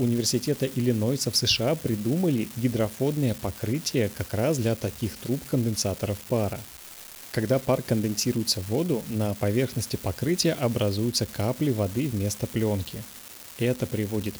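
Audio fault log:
throughout, unreliable data bit: one line of the sample data path is marginal, so its bit flips in an unpredictable fraction of samples across the whole clip. Because the same bit is always affected, every error adds a spike of identical height, around -26 dBFS. Scattered spikes of fixed size form a constant crackle or fizz laid over the speech, and since the fault does not depend on the signal, it carries on through the pauses as well.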